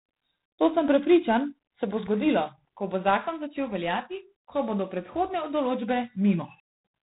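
G.726 ADPCM coding runs through the whole speech clip, and the damage is plainly audible. The codec sends only a coarse difference between each sample and an adaptive prediction. The grain here points to 24 kbit/s, about 3 bits a sample, so the quantisation noise is high. It is heard as a harsh, rasping hiss that rises and falls with the speech level. Nothing passes above 3.9 kHz, which leaves the sound narrow and muffled at the top.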